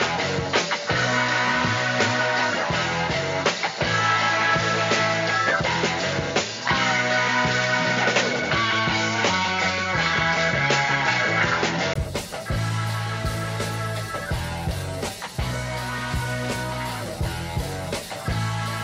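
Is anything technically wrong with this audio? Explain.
Yes. From 0.0 to 11.96 s the input likely switched to a poorer device: nothing is present above 7.1 kHz, giving a dull, boxy sound with its own low noise floor. At 11.96 s a 20 ms gap precedes clearer full-band sound and a level shift of a few decibels.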